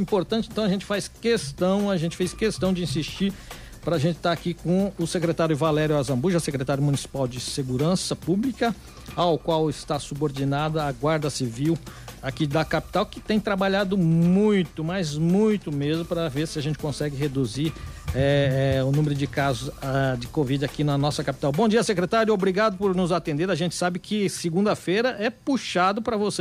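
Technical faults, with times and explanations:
16.47 to 17.00 s, GSM phone buzz: a hard, raspy buzz at about 217 Hz cuts in for roughly half a second, sitting about 24 dB below the programme and bristling with harmonics that have nothing to do with the audio. A nearby 2G handset is firing its radio bursts at that rate, and something in the audio chain is rectifying those pulses into sound. It arrives as a short burst rather than a steady drone, which fits the phone doing a data transfer rather than holding a call.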